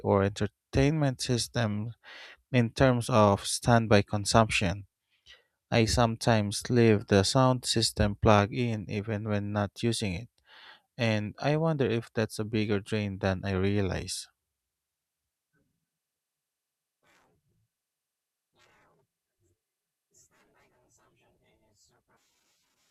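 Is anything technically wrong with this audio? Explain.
No, there's nothing technically wrong.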